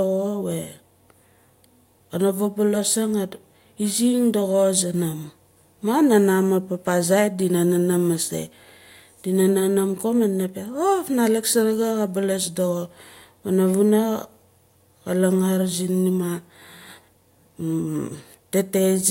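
Listening through this speech recording, nothing stood out as a technical problem at any point.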